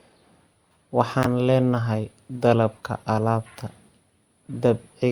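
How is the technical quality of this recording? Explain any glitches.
The speech is marred by three brief decoding glitches, each a corrupt frame decoded. They occur at 1.23 to 1.26 s, at 2.73 s, and at 4.48 to 4.51 s. Damaged bits in a compressed frame were decoded as if valid, placing energy at wrong frequencies for roughly one frame's duration. The first is loud, its error peaking around -5 dBFS. The later two are faint. A spectrogram shows short vertical smears of misplaced energy, and the waveform shows a sharp spike at 1.23 s.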